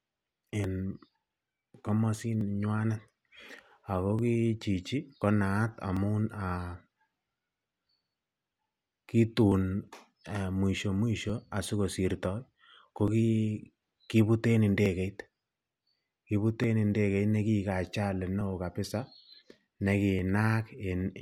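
From 0.64 s to 20.19 s, a click recurs every 1.78 s, about ten in all, during speech. These are clock drift buffer slips, likely from two clocks differing by around 700 ppm, so the buffer drifts until roughly 70 samples are dropped or repeated.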